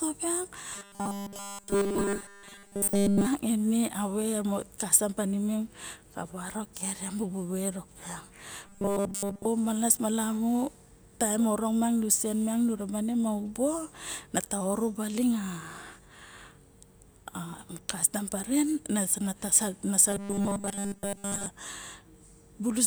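A rigid, metallic 200 Hz buzz takes over the speech almost entirely from 0.75 to 3.27 s, and mostly from 8.67 to 9.46 s and 20.1 to 21.46 s. This is robotic sound from repeated short buffers, likely a 5 ms chunk looped while the real audio is skipped.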